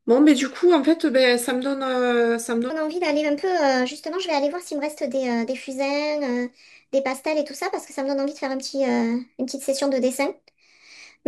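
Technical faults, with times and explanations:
2.70 s to the end at 11.27 s, section at the wrong speed: from 2.70 s the speech runs 1.26 times faster and rises about four semitones, so voices sound higher and more hurried until the clip ends. The likely cause is this stretch being played against the wrong clock. Speed and pitch move together and change abruptly. A pitch-shift would keep the pace, and a time-stretch would keep the pitch.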